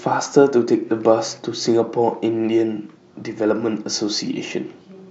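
No faults detected anywhere in the speech recording.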